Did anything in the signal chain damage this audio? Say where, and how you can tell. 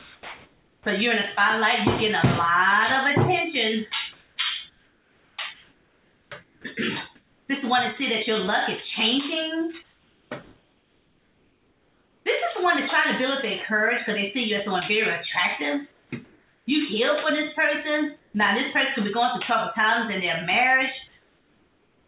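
Yes. From 0 to 7.49 s the sound is chopped by the voice detector, likely in the sender's call processing, where discontinuous transmission switched on and off repeatedly. About 3.1 s of that stretch is replaced, so quiet edges drop out. On a spectrogram you'd see detailed passages interrupted by flat, evenly textured noise blocks, all capped at 4 kHz by the G.711 path. The waveform shows envelope edges abruptly squared off.

Comfort noise in place of the background appears at 9.83 to 12.26 s (about 2.3 s replaced), 16.25 to 18.35 s (about 0.57 s) and 21.08 to 22.08 s (1 s). This is likely the receiver filling gaps during transmission pauses. In the last gap the background sits about 40 dB below the loud parts and drops by about 2 dB. On a spectrogram the real background's texture gives way to smooth, featureless noise.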